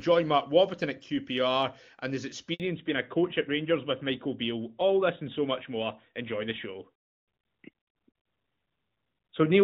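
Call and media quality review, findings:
Handover gap, 2.54 to 2.60 s: inter-network handover, no speech frames delivered during the switch. Audio drops out for 60 ms and resumes only once the new link carries frames; content in that window is lost.

Fallback to narrowband, 2.60 s to end: call drops from AMR-WB (HD Voice) at 23.85 kbit/s, clear before the switch, to AMR-NB at 12.2 kbit/s. Nothing above 4 kHz passes, so the speech turns duller.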